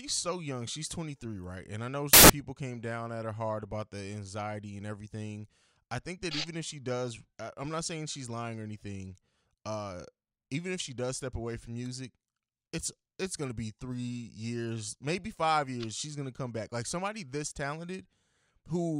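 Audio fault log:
2.13–2.30 s, samples built from the wrong bytes: for about 0.16 s, between "I know" and "people came down at", the reader assembled each sample from misaligned or swapped bytes, so the rapidly fluctuating low-order bits landed in the most significant position. Every value becomes essentially random and large, and the speech is replaced by a burst of loud, harsh broadband noise that starts and stops abruptly at the edges of the bad stretch.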